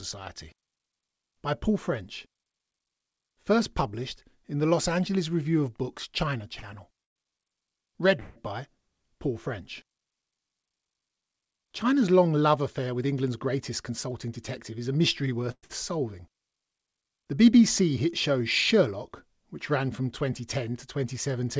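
Speech carried over a call path whose band ends at 8 kHz, which points to G.722 at 64 kbps, with three kinds of fault. Short stalls from late packets at 6.60–6.65 s and 15.65–15.71 s emptied the jitter buffer, so the receiver held the last sound for 26 ms and 48 ms before resuming in place, leaving a stretched, faintly buzzy moment with nothing lost. The call audio freezes at 7.04–7.18 s, 8.20–8.38 s and 15.51–15.65 s (just after "a mystery") likely come from packets held up in transit. Each inserts a gap of 118, 163 and 112 ms, as a fading buzz that drops to about 110 ms and 50 ms of silence in the first and third. A jitter buffer speed-up from 12.58 to 14.89 s, ending before "a mystery", trims around 150 ms of pitch periods, so the speech runs at 106% speed, hurried but at unchanged pitch.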